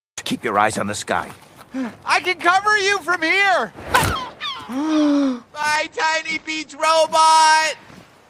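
From 5.76 s to 6.89 s a call bitrate drop turns the sound coarse and muffled. The encoder, consistent with a fall from about 40 to 14 kbps, narrows the band from 20 kHz to 8 kHz, so a spectrogram shows everything above 8 kHz gone.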